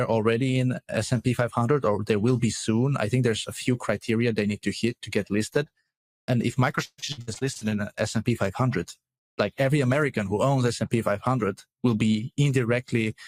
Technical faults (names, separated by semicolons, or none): repeated packet loss (robotic sound)